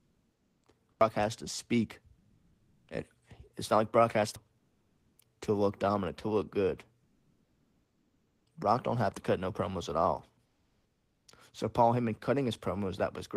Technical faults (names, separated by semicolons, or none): comfort noise in place of the background; CD skip